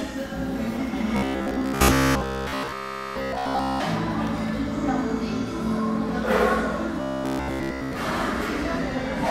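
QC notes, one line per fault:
1.16 to 3.82 s: robotic sound from repeated short buffers. Most of the sound becomes a rigid metallic buzz at 66.7 Hz. A 15 ms chunk is likely being looped while fresh audio is skipped.
7.02 to 7.95 s: robotic sound from repeated short buffers. The same 66.7 Hz buzz replaces the sound completely. It likely comes from a repeated 15 ms buffer, and nothing new gets through.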